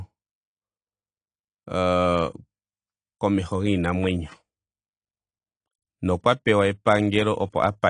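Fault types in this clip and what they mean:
AAC compression: the speech runs dull and smeared throughout, with the upper spectrum thinned out and a warbling, fizzy texture on sustained sounds and sibilants, and the damage is plainly audible. The likely cause is AAC-LC coding at a low bitrate, which fits a rate around 32 kbps. At that rate the encoder lowers its cut-off, quantises the frequency lines coarsely against its hearing model, and leaves gaps or noise-filled bands.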